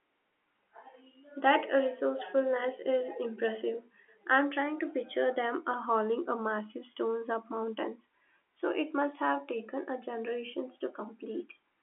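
No technical faults are audible.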